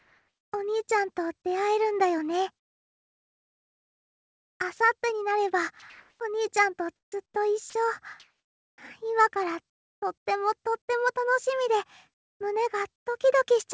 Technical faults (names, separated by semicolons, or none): comfort noise in place of the background; sound dropped by the voice detector; onset clipped by the voice detector